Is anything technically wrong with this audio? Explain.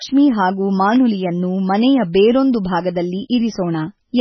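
Yes. MP3 compression runs through the whole speech clip, and the likely cause is a very low bitrate, which fits something around 16 kbps. With so few bits, the encoder drops weak frequency lines that flicker between frames, and it removes everything above 6 kHz. The result is heavy watery, swirly damage and dull, smeared consonants.

An electrical switching spike occurs at 0.96 s. It is likely a nearby switch, motor or static discharge whose arc coupled into the audio line. It is heard as a sharp snap laid on top of the speech.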